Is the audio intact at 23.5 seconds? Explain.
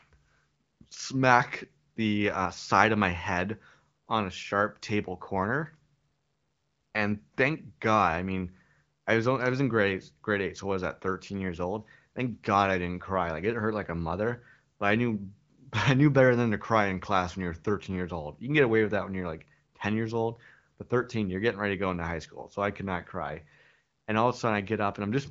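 Yes, at 23.5 seconds the speech is intact, with nothing breaking up the sound beyond the ordinary AMR wideband (HD Voice) band limit, which leaves no content above about 7.4 kHz.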